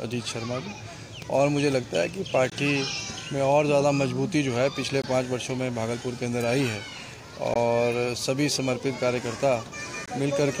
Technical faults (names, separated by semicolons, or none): gap between chunks